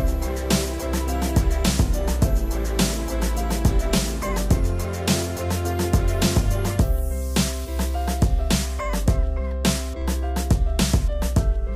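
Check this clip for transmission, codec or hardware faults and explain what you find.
One fault is present, a DC step at 10.02 s. The waveform's zero line suddenly jumps by about -32 dBFS. A high-pass near 2 Hz then pulls it slowly back toward zero. The sudden shift sounds like a single low thump. The audio above it carries on unchanged.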